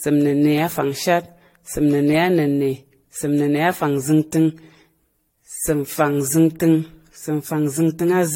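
Speech with generation loss throughout: the sound is swirly, hollow and smeared, consonant attacks blur, and nothing is present above 16.6 kHz. The likely cause is about five successive lossy passes, consistent with repeated AAC-LC encoding near 64 kbit/s, each pass quantising afresh on a shifted frame grid.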